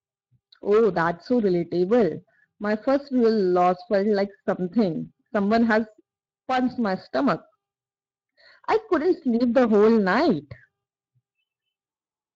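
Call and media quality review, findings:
Speex codec damage, whole clip: speech hoarse and noisy, plainly audible. Points to a CELP excitation short of bits, fitting about 20 kbps. Steady texture, not metallic swirl or dropouts, so not transform codec or packet loss.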